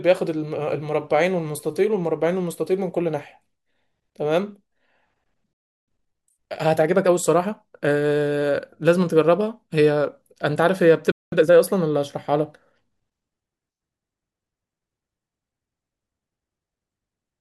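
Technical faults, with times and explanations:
5.53 to 5.88 s and 11.12 to 11.32 s, playback stall: the speech halts mid-flow into silence for about 0.34 s and then 0.2 s, likely because the player ran short of data or its thread was blocked. It is a clean gap, not a click or a burst of noise.
5.88 to 7.24 s and 11.32 to 11.52 s, time-compressed catch-up: after each stall the speech hurries, at 1.25 times speed and then 2 times, while the pitch stays normal. Small pieces are cut out and cross-faded to clear the backlog, rather than the raised pitch of a simple speed-up.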